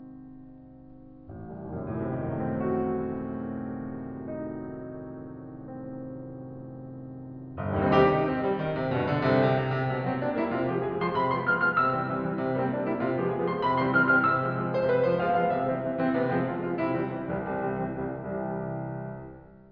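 No technical faults turn up anywhere in this music recording. Nothing in it breaks, drops out or stumbles at any point.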